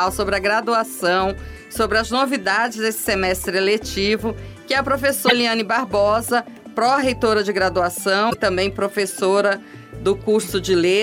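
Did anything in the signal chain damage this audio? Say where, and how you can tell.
Yes. There are two short garbled breaks, from 5.27 to 5.32 s and from 8.30 to 8.35 s. Each lasts about 60 ms, roughly two 26.1 ms MP3 frames. The stage is the codec or storage layer, and the likely cause is a broken MP3 bit reservoir. Frames appear to have been lost, so the following frames reached back into the reservoir for borrowed bits and decoded unrelated bytes. That produces a brief corrupted burst until the stream resynchronises.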